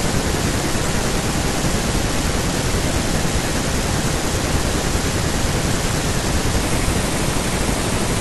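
From 6.61 s to the end at 8.21 s, the speech runs as a section at the wrong speed: it plays back 1.24 times faster, so the voice jumps up by about four semitones and sounds hurried and thin. The likely cause is this stretch being resampled against the wrong clock. On a spectrogram, the harmonics and formants shift upward at once at 6.61 s. The waveform's syllables and pauses become visibly compressed in time.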